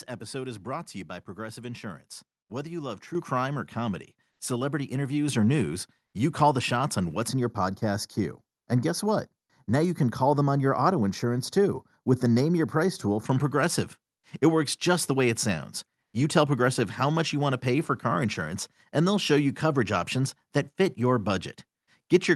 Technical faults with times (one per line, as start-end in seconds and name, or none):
3.15 microphone volume stepped up
4.31-4.39 comfort noise in place of the background
5.28 microphone volume stepped up
7.28-13.26 channel delay (comb filtering)